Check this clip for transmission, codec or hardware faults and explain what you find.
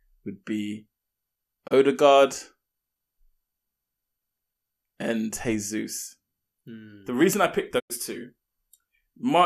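Two digital broadcast dropouts are audible. At 1.66 to 1.73 s and 7.78 to 7.92 s, just after "reason I picked", the receiver muted on corrupted frames. The sound fades out over 20 ms and falls silent, then returns with the missing audio lost. The gaps fit one and four lost frames of roughly 24 ms each.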